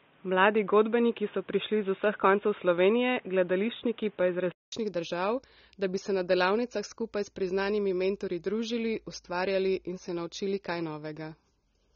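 From 0.0 to 4.72 s the input switched to a poorer device, likely a headset or secondary microphone. Nothing passes above 3.8 kHz, the tone is boxy, the noise floor sits about 35 dB under the signal, and the level differs by about 5 dB. A 200 ms silence marks the switch back, just before "držav da bi se".

Throughout, AAC compression is plainly audible, likely AAC-LC at a low rate that fits roughly 24 kbps. The spectrum stops at 6.9 kHz, so the sound is dull, and sustained sounds and sibilants carry a smeared, warbling, fizzy texture from coarse quantisation.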